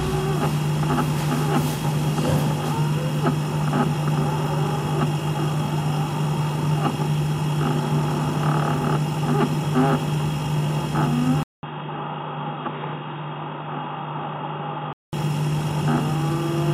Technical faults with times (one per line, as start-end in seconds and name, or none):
11.43-15.13 input switched to a poorer device